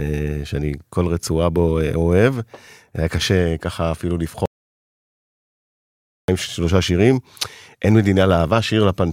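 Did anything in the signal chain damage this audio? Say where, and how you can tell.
Yes. An audio dropout to silence runs from 4.46 to 6.28 s: 1.83 s of silence, no room tone. Likely a lost input link, with the recorder still writing.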